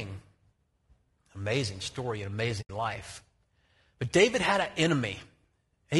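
A speech clip with two faults. Throughout, the sound is rough and grainy, with noise filling the gaps between harmonics and a thin, synthetic top band. This is likely low-delay AAC compression, AAC-ELD, whose short frames resolve pitch harmonics poorly. The plainly audible damage fits a bitrate around 32 kbps. From 2.61 to 2.70 s there is AAC frame loss with muting. The sound fades out and back in, leaving a soft-edged hole of about 80 ms. That fits about four lost frames whose spectrum the decoder set to zero.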